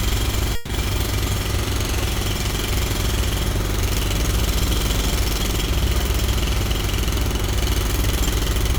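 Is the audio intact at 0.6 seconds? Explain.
No. A call audio freeze runs from 0.55 to 0.72 s. The last sound is stretched into a fading buzz for about 140 ms, likely because delayed packets emptied the jitter buffer. Nothing is lost. The audio resumes where it stopped, now 140 ms late.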